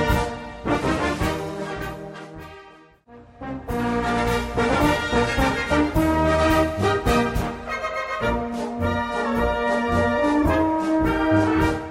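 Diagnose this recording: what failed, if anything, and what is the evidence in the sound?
Nothing failed; no faults heard.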